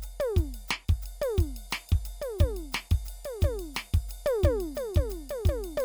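A music clip with no faults.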